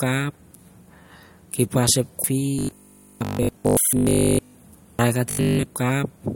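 A speech recording with a sudden skip at 2.24 s, where roughly a third of a second of audio vanishes and the two sides butt together with no gap. This is audio missing between chunks, likely from a recorder working in 3-second blocks and dropping material at the handover. From 2.59 to 4.55 s and again from 5.31 to 5.63 s the voice turns into a rigid, metallic 50 Hz buzz that only loosely tracks the speech. This is robotic sound from repeated short buffers, likely caused by the software looping about 20 ms of audio when new data arrives too slowly. That repetition replaces most of the real audio in the first stretch and all of it in the second.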